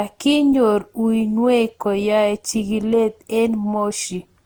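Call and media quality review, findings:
Generation loss, throughout the speech clip. Swirly, smeared, hollow texture with blurred attacks, worse than a single 64 kbit/s Opus pass would produce. Likely repeated decode and re-encode through Opus, around ten passes. Each pass requantises on a shifted frame grid, stacking noise and spectral holes. Bandwidth stays intact to about 20.2 kHz, so the damage comes from the repeated passes, not low-pass filtering.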